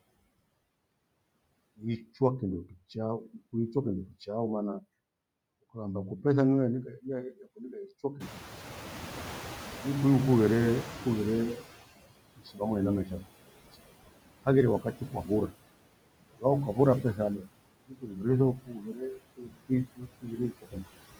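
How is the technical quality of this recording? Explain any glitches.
The recording has some clear noise-suppressor trouble, and it gets worse in the second half.

Noise suppressor artifacts run the whole way through. The suppressor pulls down the bands it judges to be steady noise by about 19 dB, frame by frame. So the background dips in the gaps and swells back up under the speech.

Around 8 s the room noise jumps by about 20 dB and settles roughly 13 dB under the speech. From 8.2 to 11.83 s you can hear the noise suppressor catching up. Its noise estimate lags behind the jump, so the louder background comes through with less reduction at first. Over about 3.6 s the estimate adapts and the noise sinks back, to a cut of about 16 dB.

Once it has adapted, the suppressor starts eating into the speech itself. This speech cut by the noise suppressor happens at 12.38–12.61 s (down about 18 dB), 13.04–13.27 s (about 14 dB), 14.8–15.54 s (about 19 dB), 16.37–17.48 s (about 19 dB) and 17.87–20.86 s (about 22 dB). 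It mistakes soft parts of the speech for noise. Quiet consonants and word endings get dragged down with the background, so they sound swallowed or faint. The last stretch is the worst, with around two seconds of it turned down.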